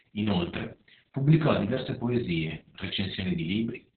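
Opus voice compression runs throughout the speech, cutting everything above about 4.3 kHz. The sound points to narrowband SILK coding at a very low bitrate, around 6 kbps, with a coarse excitation that leaves the speech muffled, hoarse and faintly robotic.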